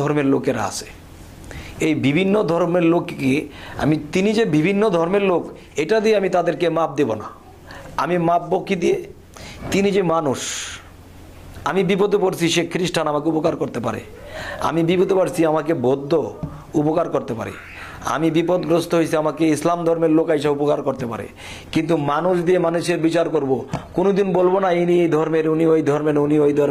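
From 21.67 s to the end of the clip at 26.70 s, the sound abruptly loses clarity with no gap: nothing is present above 14.9 kHz, and coding artefacts rise. This is an adaptive stream at a lower bitrate. A slowing connection pushed the player onto a much leaner encoding, and the character of the change points to a drop from roughly 96 kbit/s AAC to a 20 kbit/s HE-AAC stream.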